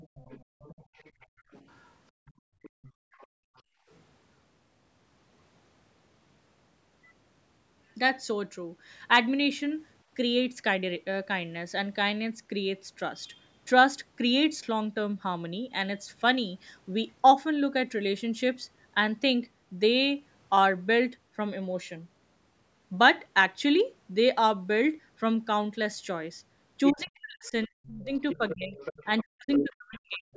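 Speech recorded through a call's microphone processing, whose spectrogram shows nothing above 8 kHz (which points to a 16 kHz sample rate), carries three echo-canceller faults. The other side's voice leaking through, likely residual loudspeaker echo the canceller failed to remove, is heard from the start to 3.61 s at roughly 25 dB below the talker, again from 26.86 to 27.5 s at about 15 dB below, and from 28.15 s to the end at only about 10 dB below. On a spectrogram it shows as a second set of harmonics laid over the main one. Background gated by the echo canceller appears from 0.44 to 1.47 s, with about 0.3 s affected, and from 2.12 to 3.89 s, with about 1.5 s affected. The room floor falls by about 31 and 32 dB while the loudspeaker plays, seen as near-silent holes in the waveform's noise floor and dark vertical gaps on the spectrogram. Speech suppressed in double talk runs from 26.91 to 30.28 s, likely because the canceller mistook the overlapping talk for echo and turned everything down. 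Around two seconds of the talker's voice dip by as much as roughly 40 dB, so the waveform envelope caves in and the spectrogram loses energy in patches.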